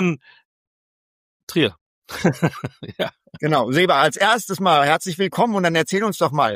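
No technical faults can be heard anywhere here.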